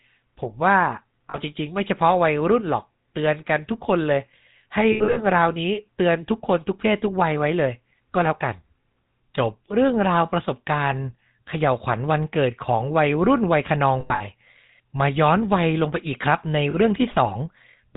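GSM full-rate codec damage runs through the whole of this speech clip. Nothing passes above 4 kHz, and a plainly audible buzzy, gravelly roughness comes from modelling the vocal tract and driving it with sparse, regularly spaced pulses, consistent with the 13 kbps full-rate coder. Lost GSM frames occur at 1.30 to 1.38 s and 16.70 to 16.75 s, each a brief 40 ms loss. At 4.92 to 5.20 s and 14.00 to 14.22 s, about 160 ms goes missing in scattered pieces, with the longest runs around 70 ms and 100 ms. Each gap is filled by repeating the last good frame, which holds the sound as a short, rough metallic ring.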